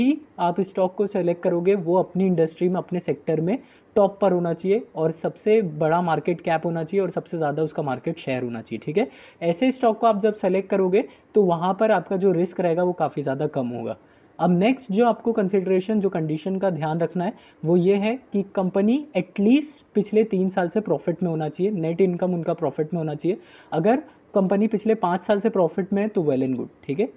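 No technical fault can be heard anywhere in the audio, and the signal stays steady and intact throughout.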